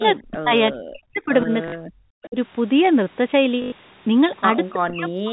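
From 0.18 to 0.53 s and again from 0.71 to 2.36 s, the speech drops away in pieces, falling by roughly 40 dB at its deepest. This is speech suppressed in double talk, likely caused by an echo canceller that turned the talker down while the other side spoke. On a waveform the envelope collapses to near flat. On a spectrogram the harmonics and high band thin out or vanish in patches.

Inside that span, at 1.68 to 1.72 s, 40 ms of audio was lost, which fits two 20 ms packets. It was filled by packet loss with last packet repeated. The same fragment plays three times in a row, with a brief robotic buzz near 50 Hz. A spectrogram shows a repeated block with vertical lines at the seams.

At 2.22 to 2.27 s a faint copy of the speech arrives about 352 ms late, around 25 dB under the main level. This is echo leak, likely from a loudspeaker echo the far end's canceller failed to remove. A spectrogram shows a weak, delayed, ghosted repeat of earlier harmonic patterns.

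From 3.62 to 3.72 s a longer 100 ms gap, consistent with five 20 ms packets, is again patched by repeating the last packet. It produces a stutter that buzzes at about 50 Hz. The waveform shows five identical cycles in a row, and the spectrogram shows evenly spaced vertical striping.

From 4.73 s to the end, speech suppressed in double talk returns, likely for the same reason. The level sinks by up to about 40 dB and the upper frequencies fade in chunks. On both displays the envelope is gated and the spectral content patchy.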